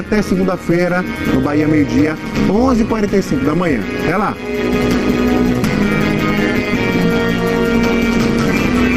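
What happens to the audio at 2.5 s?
At 2.5 s the sound carries overlap-add ripple, as it does for the whole clip. Windowed frames were rejoined with an overlap that fails to sum to constant gain. Level dips by about 11 dB once per frame, around 200 times a second. This gives a metallic buzz with extra tones around each note.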